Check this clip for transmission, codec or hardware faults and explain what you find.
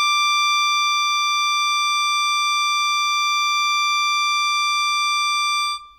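No faults are audible.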